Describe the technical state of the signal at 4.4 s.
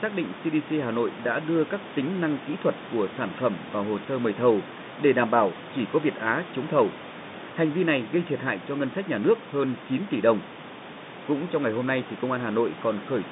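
At 4.4 s the speech is intact, carried in the narrow telephone band with nothing above about 3.8 kHz and the room's background noise sitting about 13 dB beneath it, with no fault present at that moment.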